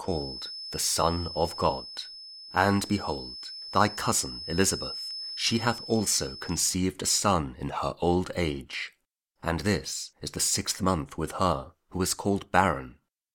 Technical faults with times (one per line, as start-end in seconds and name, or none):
0.00-6.70 feedback whistle